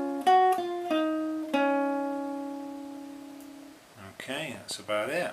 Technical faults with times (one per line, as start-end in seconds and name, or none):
4.20-5.24 train of clicks